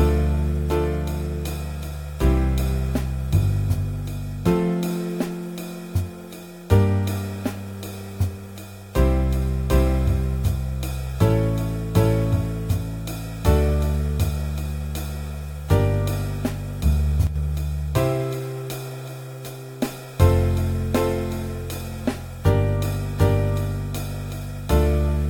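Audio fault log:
17.27 to 17.36 s, one channel drops out: for about 90 ms one side of the stereo feed likely stopped delivering signal, so the mono sum loses half its input. Material shared by both channels falls abruptly by about 6 dB, and anything carried only on the missing side vanishes outright. The result is a brief, sharp dip in loudness before the full level snaps back.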